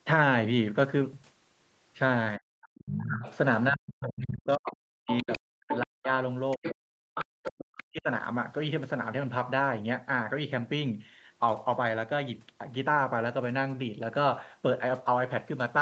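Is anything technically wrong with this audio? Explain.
Yes. Between 2.38 and 8.08 s the talker's speech keeps sinking and breaking up. Over roughly four seconds in total it dips, goes dull and in places drops out almost entirely, falling by as much as about 40 dB. This is speech suppressed in double talk, likely from the echo canceller treating the talker's voice as echo while the far end was also speaking, and pulling the microphone signal down to stop that echo.

Over the same stretch a second voice can be heard underneath. From 2.62 to 3.36 s it is faint and well below the talker. From 4.69 to 5.78 s it is almost as loud as the talker. From 6.51 to 7.8 s it is clearly present, somewhat quieter. This is the other side's voice leaking through, likely because the loudspeaker playback reached the microphone and the echo canceller did not remove it fully. It overlaps the stretches where the talker is suppressed. 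Throughout the clip, the band stops at about 8 kHz, as expected for the Opus call path.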